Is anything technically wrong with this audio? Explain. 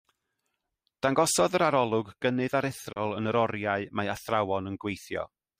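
Yes. There is one fault, a Bluetooth dropout, at 2.92 to 2.99 s. The speech cuts to silence for about 70 ms and then returns. The edges of the gap are abrupt or fade over a few milliseconds. When the speech resumes, it has moved on, as if it kept playing through the gap. The likely cause is audio packets failing to reach the headphones in time and being discarded. The missing stretch fits about two lost frames, roughly 30 ms of audio.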